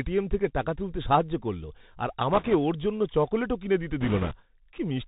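From the start the speech is narrow and boxy, with nothing above about 4 kHz, sibilants that turn scratchy, and a fine granular hiss under every phrase. This is the Bluetooth CVSD headset codec, which fits a 64 kbps link: each sample is reduced to a single up-or-down bit, and the adaptive step cannot keep pace with loud, bright sounds, so they smear and fizz.

From 2.33 to 2.54 s, right after "তুলতে সাহায্য করলো আর" and before "ওর জন্য চকোলেটও কিনে", a rushing, crackly noise washes over the speech without any sharp clicks. These are bit errors on a Bluetooth voice link, with a few percent of bits flipped. Because each CVSD bit moves the waveform only slightly and the error fades out quickly, the damage is a spread-out roughness rather than pops.

A heavier burst follows from 4.01 to 4.36 s, after "জন্য চকোলেটও কিনে দিতে". Here the error rate is around five percent, so the crackling rush is denser and hides more of the sound.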